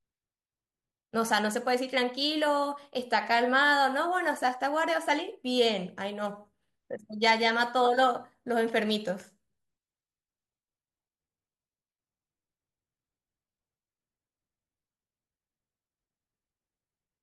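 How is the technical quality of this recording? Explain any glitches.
No glitches or technical faults are audible anywhere in the speech recording.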